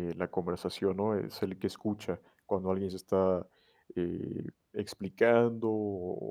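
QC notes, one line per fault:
Nothing stood out on listening to the speech here.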